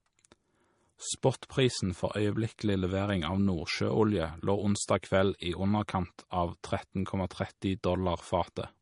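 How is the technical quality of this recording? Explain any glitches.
The recording is held back by plainly audible codec damage throughout the speech. The whole clip shows likely MP3 compression: a starved encoder, consistent with a bitrate around 40 kbps, cuts everything above 10.5 kHz and drops weak frequency lines frame by frame. The result sounds watery, with swirly sibilants, and a spectrogram shows a hard ceiling at 10.5 kHz plus flickering holes in the upper bands.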